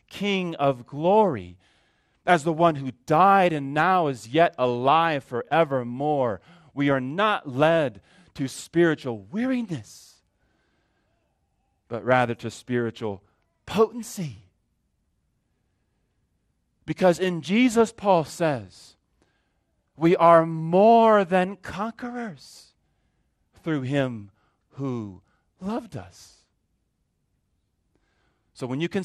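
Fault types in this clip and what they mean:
MP2 compression: gurgling, granular, dull speech throughout; spectrogram shows upper sub-bands flickering on and off, which fits a likely MP2 encode around 80 kbps.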